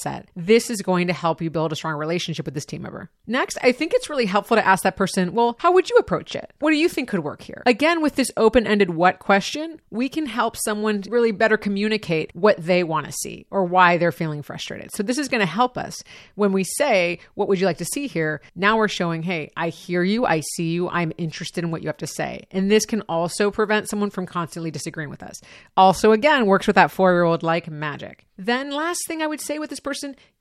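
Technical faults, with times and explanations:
No technical faults can be heard in the recording; the speech signal holds steady in continuity for its whole length.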